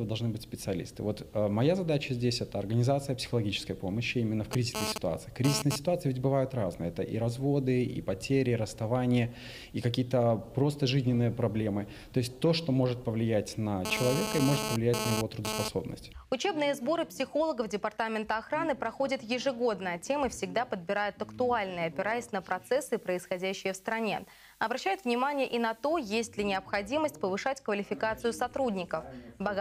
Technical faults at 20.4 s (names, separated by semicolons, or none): none